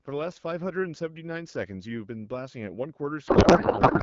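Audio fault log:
3.27 to 4.03 s, codec payload misread: the speech gives way to garbled noise and warble that barely tracks it, right through to the end of the clip. The decoder is reading octet-aligned AMR-WB frames as bandwidth-efficient ones, so every field lands in the wrong bits.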